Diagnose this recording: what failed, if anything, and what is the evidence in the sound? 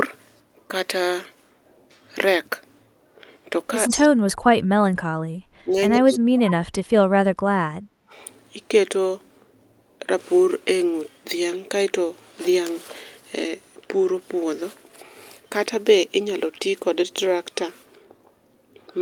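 Echo leak at the call-processing stage: a copy of the speech trailing by 121 ms appears at 3.84–4.08 s, 5.97–6.15 s and 6.46–6.51 s, about 5, 20 and 15 dB down. Room reverberation would smear; this fixed-lag repeat likely escaped the echo canceller.

Speech suppressed in double talk, also in call processing: the level plunges at 3.96–4.89 s and 6.01–7.53 s (about 40 dB deep), and at 5.64–5.75 s and 7.78–7.98 s (about 15 and 25 dB). Two of the dips overlap the echo, so this is likely canceller suppression, not network dropout.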